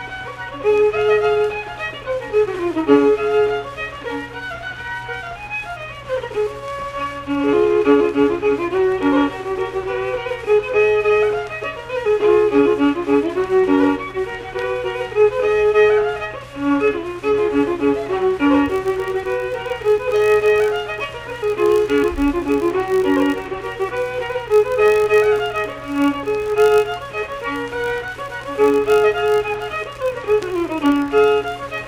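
From 18.64 s to the end, a filter restarted on every block resets its state, producing a 50 Hz buzz of transients that tracks the signal's level, consistent with 20 ms blocks.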